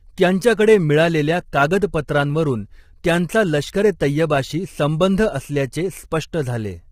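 From start to end the speech has a rough, grainy texture, with noise filling the gaps between the pitch harmonics and a dull or synthetic-sounding top band. This is heavy damage of the kind produced by low-delay AAC compression, likely AAC-ELD at a bitrate around 24 kbps. Its short frames of roughly 10 ms resolve the harmonic structure of the voice poorly and spend bits inefficiently, so at this rate the coder smears the harmonics and thins or synthesises the upper frequencies.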